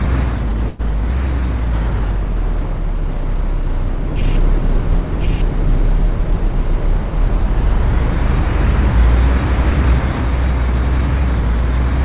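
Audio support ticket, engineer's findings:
Call audio freeze, 0.68 to 0.82 s: last sound stretched into a fading buzz or hiss for about 110 ms, then playback resumes where it stopped. Nothing lost, but everything after runs about 110 ms later. Likely cause: packets held in transit, jitter buffer drained, receiver concealing the gap with synthesized fill. Band already tops out at 4 kHz, consistent with a G.711 narrowband call leg.

Doubled audio track, 4.21 to 10.21 s: second full-band copy of the audio running roughly a second behind, at about the same level as the original. Dry, no reverb tail or room colour, cuts in and out abruptly at both ends. Likely cause: the same signal is mixed in twice, from a slower second capture path or two misaligned copies in an edit.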